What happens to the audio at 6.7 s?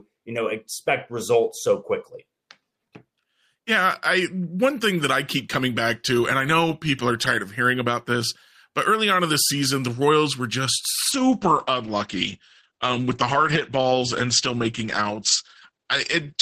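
Nothing goes wrong at 6.7 s; the speech carries on intact through that moment without any dropout, click, distortion or other technical fault.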